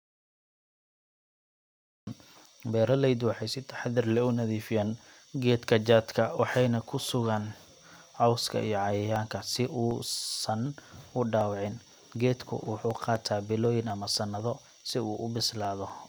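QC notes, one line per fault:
0.00–2.07 s, audio dropout to silence: the clip opens already cut out, and the speech arrives abruptly at 2.07 s rather than fading up. The gap is silent with no room tone, which points to the input having likely been lost while the recorder kept writing silence. On the waveform it is a flat line; on the spectrogram, a dark block across all frequencies, ending in a hard vertical edge.
7.67–15.90 s, periodic USB or driver dropouts: a small tick sounds every 0.249 s, about thirty in all, each where roughly half a millisecond of audio was skipped rather than replaced. Something is stalling the bus or driver on a fixed schedule, and the missing samples leave a step in the waveform that clicks. The ticks are heard only over the speech. On a spectrogram they show as evenly spaced thin vertical lines running through the speech energy.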